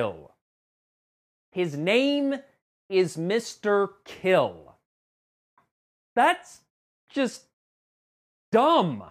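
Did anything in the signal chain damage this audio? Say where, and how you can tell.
No, nothing in the signal chain stood out as damaging this audio on listening.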